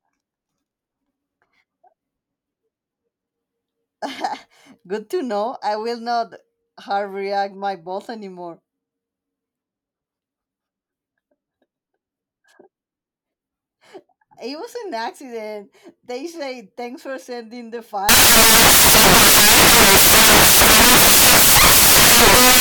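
From 18.09 s to the end at 22.6 s, the speech gives way to loud, harsh broadband noise: samples built from the wrong bytes. The byte order or alignment is wrong, so the rapidly changing low bits land in the high-order positions.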